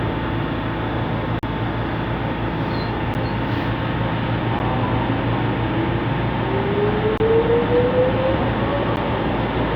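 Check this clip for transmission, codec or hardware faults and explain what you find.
The audio drops out five times with blocks of digital silence. The output buffer was likely not filled in time, so stretches of samples went out as zeros. Each block cuts hard to silence and back with no fade: 40 ms at 1.39 to 1.43 s, a short audible hole, then 10 ms ticks at 3.14, 4.59 and 8.96 s, and a 25 ms gap at 7.18 to 7.20 s.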